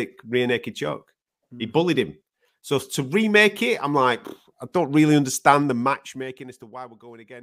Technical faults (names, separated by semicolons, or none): zipper noise